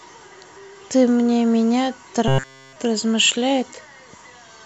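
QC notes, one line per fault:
2.28–2.76 s, robotic sound from repeated short buffers: across the whole stretch the speech collapses into a rigid metallic buzz at 134 Hz that only loosely tracks the words, likely because audio arrived too slowly and a block of about 7.5 ms was replayed over and over in place of the real signal. On a spectrogram this shows as flat, evenly spaced harmonic lines at multiples of 134 Hz; the waveform repeats an identical cycle every 7.5 ms.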